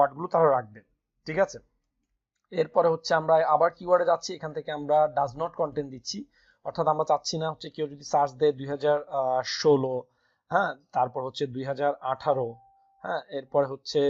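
No technical faults can be heard in the audio, so there is nothing to place in time order.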